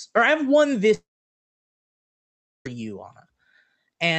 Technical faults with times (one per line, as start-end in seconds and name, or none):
0.94-2.66 long network dropout